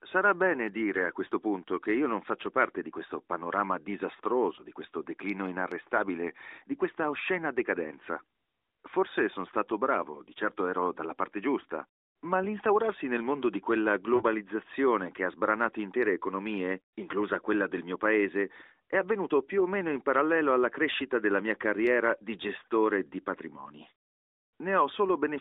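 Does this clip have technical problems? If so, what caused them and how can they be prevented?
Yes. Lost AMR speech frames occur at 4.56–4.62 s, just before "di questo declino inarrestabile", and at 14.16–14.23 s, just after "nel mondo di quella". Radio errors corrupted frames, so the decoder replayed the last good pitch and vocal tract settings at falling gain. This produces a brief dip or warble: the first is consistent with one lost 20 ms frame, the second with two (40 ms). Stronger radio coverage, or recording over a wired or packet link with error protection instead of a circuit-switched mobile call, prevents these gaps.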